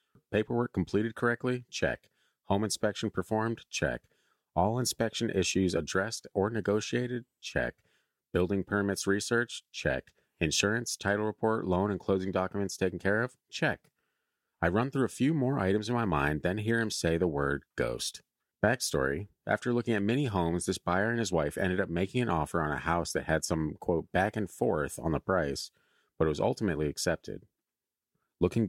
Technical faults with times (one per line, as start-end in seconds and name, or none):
none